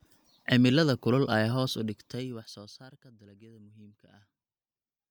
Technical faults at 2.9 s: zipper noise

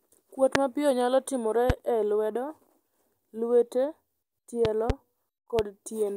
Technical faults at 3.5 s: none

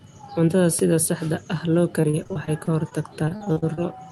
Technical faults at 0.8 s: loud pop

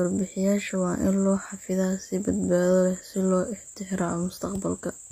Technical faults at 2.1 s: HE-AAC compression

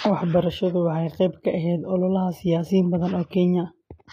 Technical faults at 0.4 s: HE-AAC compression

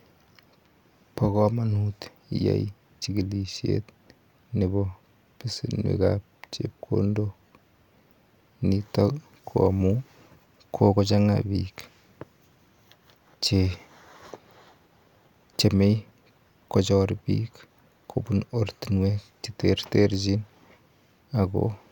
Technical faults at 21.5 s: none

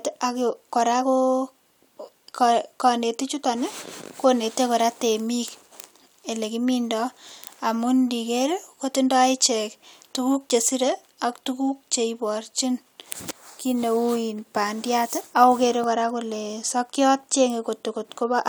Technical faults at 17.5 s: none

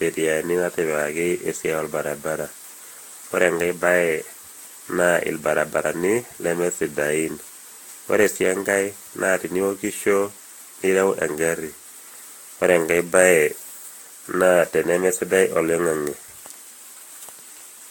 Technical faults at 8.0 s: generation loss

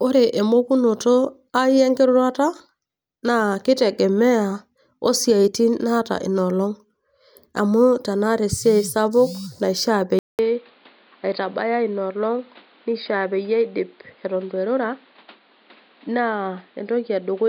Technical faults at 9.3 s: none

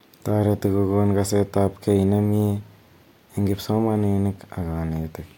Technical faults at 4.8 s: none

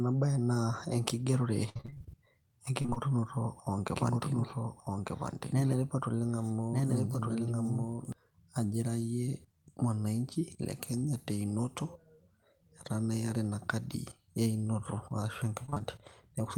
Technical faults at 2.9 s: repeated packet loss (robotic sound)

